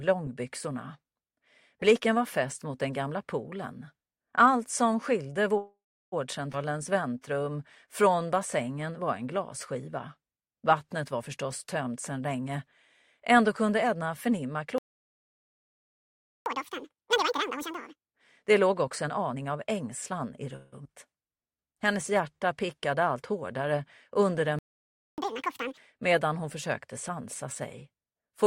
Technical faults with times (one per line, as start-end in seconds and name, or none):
5.57-6.14 call audio freeze
6.52-6.55 skip ahead
6.66-8.27 jitter buffer slow-down
11.66-14.67 jitter buffer speed-up
14.78-16.46 playback stall
16.46-18.14 catch-up at higher speed
18.67-20.43 jitter buffer speed-up
20.56-20.74 call audio freeze
20.84-20.87 skip ahead
21.23-22.67 jitter buffer slow-down
24.59-25.18 playback stall
25.18-25.77 catch-up at higher speed